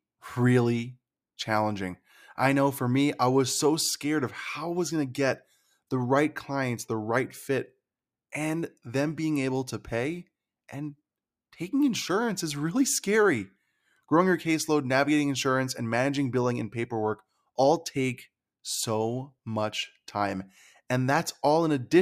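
No technical faults can be heard anywhere in the speech recording, and the signal holds steady throughout.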